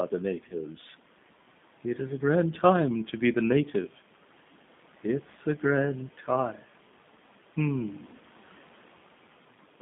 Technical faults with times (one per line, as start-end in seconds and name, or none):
0.00-9.81 G.729 codec
0.49-0.56 VoIP packet loss concealed by the speech codec
6.18-6.28 speech cut by the noise suppressor